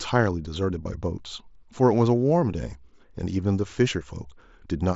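At 0.83 to 0.85 s there's a short concealed Bluetooth headset packet loss. For about 22 ms the headset-to-phone link dropped audio, which fits roughly three lost packets in a row, and the receiver covered the gap by repeating the closest-matching piece of the speech it had just received. You catch a buzzy sameness there, held at full level, and a tiny warble as the real signal picks up again, all sitting on top of the usual light grain of the mSBC wideband link.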